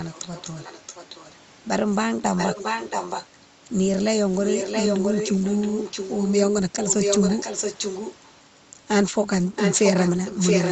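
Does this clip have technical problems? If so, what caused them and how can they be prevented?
Yes. The clip has an echo leak, most likely from a far end playing the call on a loudspeaker while its echo canceller failed to subtract what the microphone picked up, so the speech came back about 676 ms late. Five stretches carry it: 0.09–1.34 s faintly, far below the speech, then 2.37–3.26 s, 4.43–6.33 s and 6.77–8.3 s clearly audible, and 9.56 s to the end about as loud as the speech itself. The speech sounds band-limited to about 8 kHz, as the call path's Opus coding would give. Using a headset or a properly tuned echo canceller prevents it.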